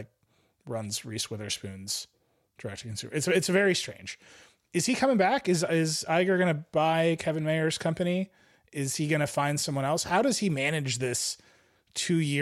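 Nothing goes wrong anywhere in this speech recording, so there's no fault to point to at any moment.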